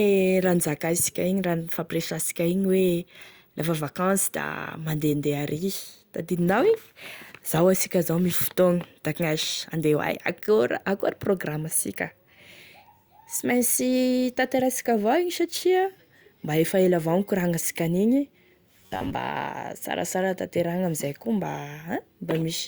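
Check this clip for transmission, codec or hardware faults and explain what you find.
There's one fault, a short stretch of robotic sound from repeated short buffers, from 18.77 to 19.15 s, just after "nikorangnansika an'igny". The speech collapses into a stiff, metallic buzz at about 93.8 Hz that still loosely tracks the words. The likely cause is audio arriving too slowly, so playback loops a tiny slice of roughly 10.7 ms over and over. That repetition fills about half the stretch and stamps its own fixed pitch on the sound.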